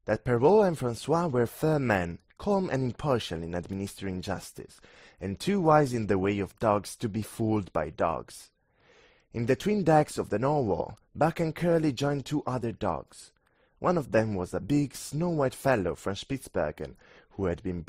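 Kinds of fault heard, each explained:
Transcoding between lossy codecs, throughout: the speech has no content above about 15.8 kHz and carries two layers of artefacts heard together, the smeared, swirly high end of a low-rate MP3 and the buzzy, band-limited texture of Opus. The likely cause is a chain of encodes, consistent with roughly 42 kbit/s MP3 followed by 32 kbit/s Opus. The second encoder spent its limited bits reproducing the first one's damage and added its own.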